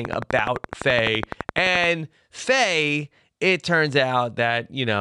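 From 0.05 s to 1.85 s a train of clicks runs through the speech, about twenty sharp ticks at a steady 11.7 per second, peaking well above the speech level. The pulses are alike in shape and keep their even pace through pauses too, which sets them apart from random crackle or isolated dropouts. A repeating pulse like this is likely interference from nearby equipment or a faulty connection or power supply injecting the same spike again and again.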